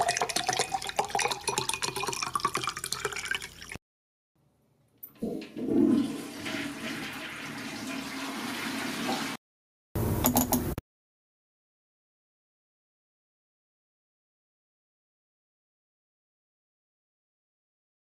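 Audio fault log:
throughout, gain pumping: the level keeps lurching, ducking by roughly 10 dB the moment a loud sound arrives, so loud and quiet events sit unnaturally close together and everything feels squashed. The likely cause is input gain set far too high, with a fast limiter or compressor clamping down on each peak. On the waveform, the loud peaks are held to a similar height, with the envelope evenly squashed.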